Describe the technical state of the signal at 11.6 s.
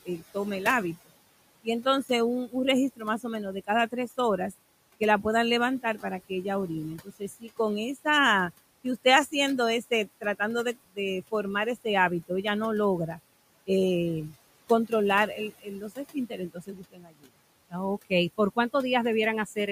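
Quiet parts of the speech sound swallowed and faint, dipping by up to about 21 dB. This is speech cut by the noise suppressor between 8.84 and 12.3 s, totalling about a third of a second. The suppressor took these soft stretches for noise and turned them down along with it. Under that, the background sinks between phrases and rises beneath them. These are noise suppressor artifacts, lowering the room noise by about 20 dB frame by frame.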